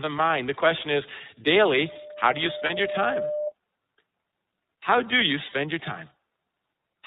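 Speech recorded through a narrowband chain carries the iLBC codec sound from start to finish. Nothing above 4 kHz survives, so a spectrogram shows an empty band over that line, and the plainly audible coding damage gives the voice a rough, somewhat synthetic grain. iLBC codes each frame's excitation independently, and the behaviour here points to its 30 ms frame mode, which fits a rate around 13.33 kbps. From 1.83 s to 3.53 s a loudspeaker feedback squeal rises at 600 Hz. The microphone is hearing the loudspeaker it drives, and at that frequency the loop gain exceeds one, so the tone feeds on itself. It swells over roughly a second and a half to a few dB below the speech. On a spectrogram it appears as a single horizontal line at 600 Hz that brightens steadily until it stops. Two stretches of lost iLBC frames occur, at 2.66 to 2.71 s and 5.49 to 5.53 s, each about a frame's length. In each gap the decoder fills in by repeating the last pitch cycle with added noise, which produces a brief held, buzzy vowel. 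On a spectrogram this shows as flat, frozen harmonics and on the waveform as a short stretch of near-identical repeated cycles. Because each frame decodes independently, the audio recovers immediately afterward.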